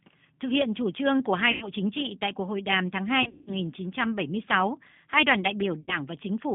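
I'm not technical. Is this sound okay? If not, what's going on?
No. The whole recording has passed through the G.729 codec, a phone-call compressor that rebuilds speech from a simplified model of the voice. It keeps only roughly 150 Hz to 3.6 kHz, so everything sounds thin and muffled, with a noticeably rough, synthetic edge.

There is also VoIP packet loss concealed by the speech codec. When chunks of the call went missing, the decoder filled the gaps by stretching the last sound into a fading buzz or noise. This happens at 1.52 to 1.68 s, right after "chủ trương của hai"; at 3.23 to 3.55 s, the longest and most broken-up gap; and at 5.82 to 6.00 s, after "hai đoàn đại".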